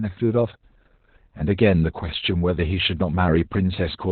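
The clip is speech, and Opus voice compression damages all of it heavily. Nothing comes through above about 4.2 kHz. The band is cut to narrowband, so the sound is muffled and dull, like an old phone line. The coder is working in its SILK linear-prediction mode and codes the excitation very coarsely. That gives a hoarse, slightly robotic grain. This degree of loss fits a bitrate of around 8 kbps.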